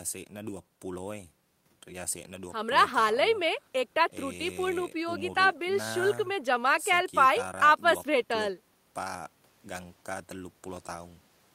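A recording of speech with nothing technically wrong to be heard in it. No fault turns up at any point along the way.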